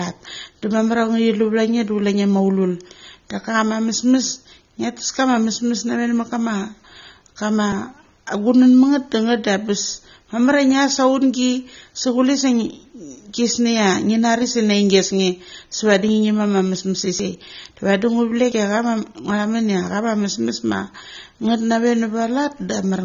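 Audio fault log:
throughout: AAC compression is the likely source of the plainly audible damage. Nothing survives above 6.9 kHz, leaving dull, smeared speech, which fits a low bitrate around 24 kbps.
14.42, 16.09, 17.20, 18.52 s: dropped buffer (overrun), likely. Each time the speech skips ahead by about 40 ms with no silent gap, the first just before "se ngi", which tells it apart from a dropout that inserts silence.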